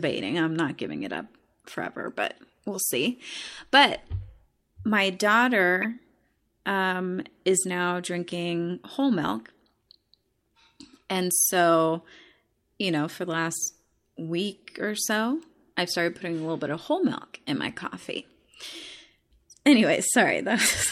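Short chirps and noise blips at 1.66–1.76 s after "not giving it up", 2.74 s, 5.82–5.84 s, and 17.81 s after "whole milk in my": corrupt frames decoded, with flipped bits misplacing spectral energy.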